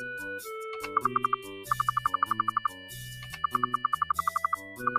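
A noise suppressor built for speech runs across the whole clip, a case of a noise suppressor applied to music or sounds. It reads sustained tones, ambience and decay as noise and pulls them down while transients pass, so the level swings by around 10 dB. Onsets stay intact, but held material and tails keep sinking, giving a pumping, fluttering, thinned-out character throughout.

The same processing produces three deeper dips where sound is cut by the noise suppressor. From 2.48 to 2.96 s the drop reaches about 5 dB over most of that span. Between 3.25 and 3.49 s a shorter stretch sinks again by about 5 dB. From 3.83 to 4.13 s a milder dip of about 3 dB affects only part of the interval. In each case the steady or decaying portions fall away and tails end early, while sharper attacks come through largely unharmed.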